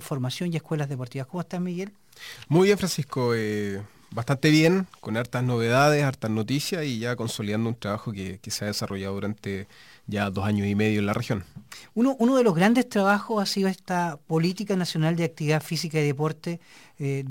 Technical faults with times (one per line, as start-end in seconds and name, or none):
8.89 repeated buffer